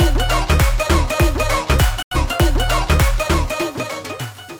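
At 2.02 s a digital broadcast dropout mutes the audio, with a fade of about 3 ms into silence, until 2.17 s. The receiver stopped getting usable frames, and roughly 85 ms of programme is missing, which fits two lost frames. The sound resumes afterwards.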